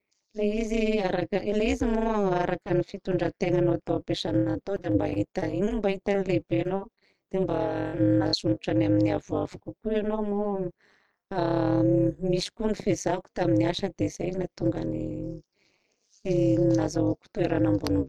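Throughout the speech, overlap-add ripple: frames were windowed and rejoined with an overlap whose gains do not sum evenly, so the level dips by about 60 dB once per frame, roughly 200 times a second, producing a metallic buzz with extra tones around the voice.

From 4.38 to 5.73 s, 6.13 to 7.03 s and 7.39 to 8.56 s, repeated packet loss (robotic sound): audio kept dropping out, gaps up to 81 ms, with each hole patched by stretching the previous sound, so these stretches turn choppy, with fragments missing.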